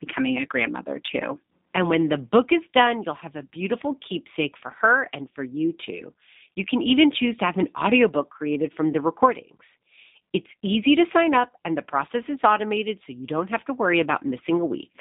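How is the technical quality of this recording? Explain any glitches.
Quality is held back by low-rate telephone-style coding across the whole speech recording. G.729 codec, throughout: the speech is rebuilt from a vocal tract filter, a pitch predictor and a few pulses per short frame, which fits an 8 kbit/s G.729A link. The band runs from about 200 Hz to 3.7 kHz with nothing above 3.8 kHz, so it sounds muffled, slightly rough and synthetic.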